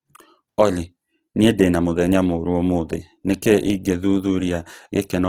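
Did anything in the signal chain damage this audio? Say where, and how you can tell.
Yes. Opus compression damage runs throughout the speech: tones turn rough, grainy and noisy rather than swirly, while the full bandwidth up to about 20.2 kHz survives. That points to a likely codec stage, Opus in its CELT mode near 16 kbps, noise-filling bands it cannot afford.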